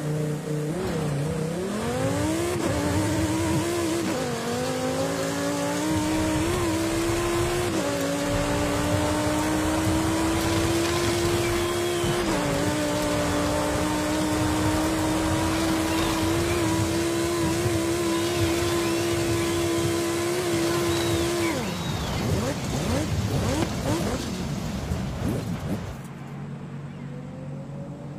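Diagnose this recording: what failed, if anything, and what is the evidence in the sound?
Frames out of order, a packet-delivery fault: at 3.05–3.16 s and 23.86–24.16 s, adjacent blocks of 46.4 and 139.3 ms are swapped, producing garbled flutter. Waveform shows abrupt discontinuities there, spectrogram thin vertical lines; no time is lost.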